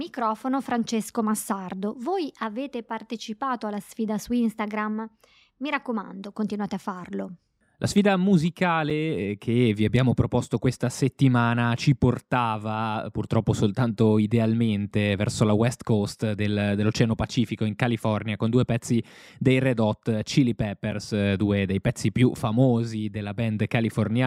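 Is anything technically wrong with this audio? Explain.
Yes. Four gaps between chunks interrupt the speech, at 2.89, 8.90 (after "sfida musicale", before "eh che vi abbiamo"), 14.91 (before "verso la west coast") and 20.91 s (before "eh due dei pezzi"). The audio arrives in 6.0 s blocks, and each join leaves a 6.5 ms hole of silence. Unlike a dropout, no speech is lost; the holes recur at a steady 6 s spacing.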